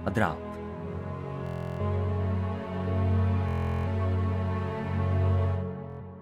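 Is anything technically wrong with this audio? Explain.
Yes, there is Bluetooth stutter at 1.47 to 1.80 s, 3.49 to 3.87 s and 5.90 to 6.01 s. Late or lost wireless packets made the receiver loop its last short buffer, giving a rapid machine-gun buzz rather than the silence of a plain dropout. The sound then resumes roughly 330, 370 and 90 ms further on, skipping that stretch.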